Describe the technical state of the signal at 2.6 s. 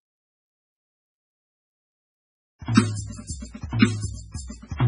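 A short hiss smears in just before the attacks at 2.59 to 2.62 s and again at 2.65 to 2.68 s, each spreading about 32 to 34 ms ahead of the hit. This is pre-echo: the codec spreads quantisation noise across a whole transform block, so noise meant for the loud onset leaks into the quiet instant before it.

The music also sounds watery and swirly, with nothing above 10.4 kHz and smeared attacks. The likely cause is heavy MP3 compression, with the dull top and warbling consistent with a very low bitrate, around 16 kbps.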